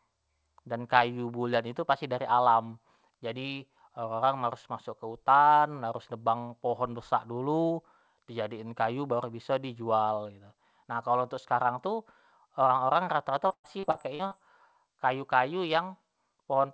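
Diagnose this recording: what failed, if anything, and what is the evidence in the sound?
Choppy, robotic speech from 13.48 to 14.33 s: network-stage repeated packet loss, eight gaps up to 117 ms, each filled by continuing the last sound.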